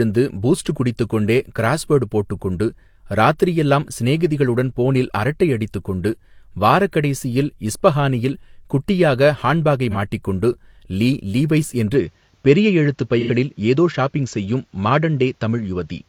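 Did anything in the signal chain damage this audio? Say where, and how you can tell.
Yes. Codec/network stage: AAC frame loss with concealment causes brief smeared, noisy patches at 9.90 s (about 43 ms, one lost frame) and 13.19–13.30 s (about 85 ms, two frames), bridged from the previous spectrum.

From 11.94 s to the end, the sound turns duller, with nothing above 7.6 kHz, a faint new noise floor and no gap or level jump, likely because the input switched to a poorer device.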